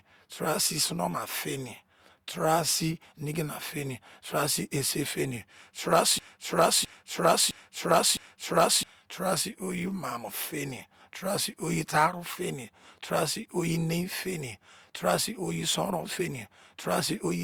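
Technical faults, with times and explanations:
6.19–8.83 s, broken-record loop: a 0.66 s fragment of speech repeats exactly four times back to back before "taara sii". The player or stream likely stalled and kept resending its last held fragment, so the speech that belonged there is lost.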